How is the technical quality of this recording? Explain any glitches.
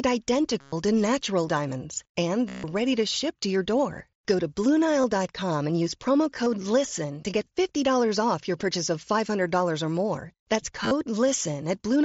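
The recording has audible glitches from concealed Bluetooth headset packet loss, carried over a wideband mSBC headset link whose coding grain is light. The losses fall at 0.60–0.73 s (before "to natural diamonds and"), 2.49–2.64 s (before "ready to ship to"), 5.02 s, 6.44–6.46 s (after "and use promo") and 10.83–10.91 s. When voice packets between headset and phone go missing, the receiver fills the gap by repeating the best-matching recent stretch of waveform. The brief 5.02 s and 6.44 s losses are nearly hidden, while the 120 and 150 ms runs become a held buzzy tone that warbles as real speech resumes.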